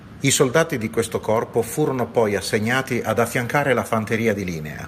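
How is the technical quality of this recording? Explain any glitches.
No glitches or technical faults can be heard here.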